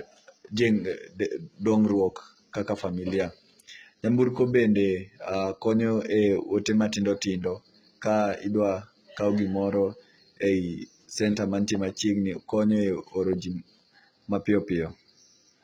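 HE-AAC compression runs throughout this speech: the treble stops dead at about 11.8 kHz, and what lies below that limit sounds gritty and lispy on s sounds. This is likely spectral band replication, with upper bands copied from lower ones and coarsely shaped, consistent with a very low bitrate around 16 kbps.

Sample clock jitter is also present for the whole clip. An unsteady converter clock takes samples slightly early or late, on the order of a microsecond. This adds a faint roughness about 45 dB below the signal, strongest on loud, bright sounds and gone in pauses.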